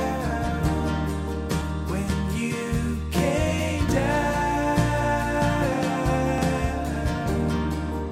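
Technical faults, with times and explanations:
1.62 s, 3.89 s and 6.38 s: damaged data in a compressed stream. Each event is a brief blip of about 4 ms, where corrupted bytes in the encoded data leave the decoder unable to read a frame correctly. It loses sync and hunts for the next valid frame header, so the garbled or missing frame comes out as a short chirp, squawk, click or hole cutting into the sound before normal decoding resumes.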